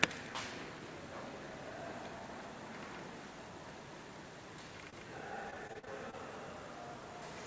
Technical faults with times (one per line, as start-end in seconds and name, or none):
4.90-4.94 short stall from a late packet
5.50-6.14 repeated packet loss (robotic sound)